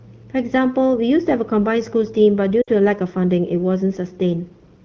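Lost AMR speech frames at 2.61 to 2.70 s: radio errors corrupted the speech data, so the wideband decoder repeated its last good settings with falling gain. The sound smears briefly and dips for about 60 ms, which fits three lost 20 ms frames, before recovering.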